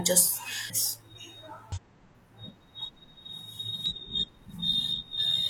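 At 0.65–0.71 s, 1.72–1.78 s and 3.86–3.93 s the speech breaks into a short chirp, squawk, click or hole from damaged data in a compressed stream. Corrupted bytes make the decoder misread frames, lose sync and hunt for the next valid header.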